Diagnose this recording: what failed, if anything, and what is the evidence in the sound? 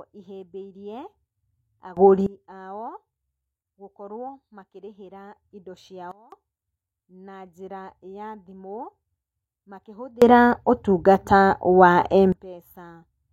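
Sudden gain jumps at 1.97–2.26 s (about +21 dB), 6.11–6.32 s (about −20 dB) and 10.22–12.32 s (about +24 dB). Speech and background noise change level together, instantly. The likely cause is a digital gain setting applied without a ramp.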